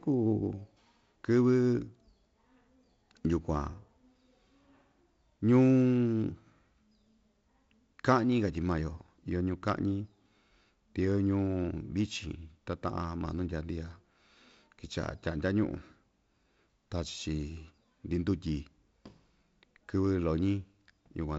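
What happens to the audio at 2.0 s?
At 2.0 s the audio is intact, with nothing beyond the band limit near 7.7 kHz and the light upper-band hiss of G.722 wideband telephone coding at 48 kbit/s.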